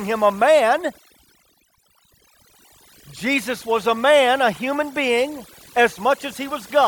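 Overdone noise removal runs throughout this speech recording: the noise reducer, set far too aggressively, pulls individual frequency bands down whenever they approach its noise estimate, so the gaps sink to near silence with twinkling specks, and the voice loses its quieter detail.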